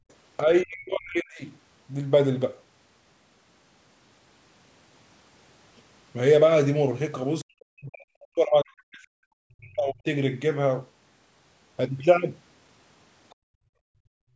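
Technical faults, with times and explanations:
0.0 to 0.08 s and 13.35 to 14.35 s, background gated by the echo canceller: the room tone under the speech drops sharply, by about 32 dB in the opening 0.08 s and by about 38 dB over roughly the last second. The echo canceller treated these moments as loudspeaker playback and pulled the microphone gain down hard, so the ambient floor vanishes rather than fading. At the start the gate releases almost at once; at the end it stays shut until the clip stops.
0.43 to 1.42 s and 7.43 to 10.05 s, speech suppressed in double talk: the talker's level sinks and breaks up, by around 35 dB in the first span and around 40 dB in the second, with the affected parts adding up to about one second and about two seconds. This is likely the canceller failing to separate near-end speech from the far-end echo while both sides talked, so it attenuated everything. 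The result is a speaker who seems to duck away or drop out in pieces instead of holding a steady level.
8.2 to 8.27 s and 13.3 to 13.35 s, other side's voice leaking through: brief scraps of a second voice sit well under the main speech, roughly 35 dB down in the first and roughly 40 dB down in the second. This is likely far-end audio from the talker's loudspeaker that the canceller did not fully subtract from the microphone signal. Each scrap lasts just 50 to 70 ms and sounds faint rather than like continuous speech. The second scrap leads directly into the final gated stretch, where the canceller clamps down.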